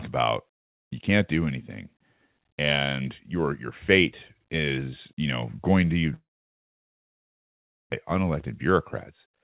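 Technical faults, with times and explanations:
6.14–7.94 s, long network dropout: right after "you know going to", the sound smears into a brief fading buzz, then sits near-silent for about 1.7 s, likely from packets not arriving. About a second is simply lost, and the 4 kHz-limited G.711 audio resumes later.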